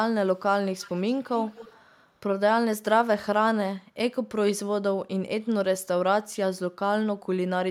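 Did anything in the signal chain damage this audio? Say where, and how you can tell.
Yes. At the call-processing stage, echo leak appears from 0.78 to 1.23 s and from 1.41 to 1.85 s. A faint copy of the speech trails it by 218 ms, about 25 then 20 dB below. This is likely a far-end echo canceller letting loudspeaker pickup back into the call.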